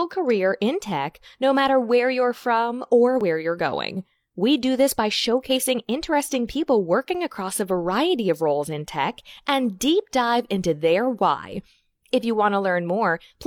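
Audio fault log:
3.21–3.24 s, overlap between stream segments: two adjacent segments carry overlapping time stamps, so the player trims the overlap from speech that was never duplicated. About 33 ms of audio drops out and the waveform jumps, heard as a tiny skip.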